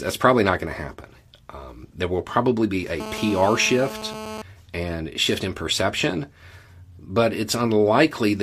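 Speech, with a GSM phone buzz cutting in from about 3.00 s to 4.42 s, right after "there will probably be" and clearing before "and shift in perception". It's that hard, raspy tone at 217 Hz with a stack of harmonics, sitting about 11 dB below the speech and holding steady, which fits a 2G phone nearby on a call: its transmit bursts get rectified by the audio circuitry and come out as buzz.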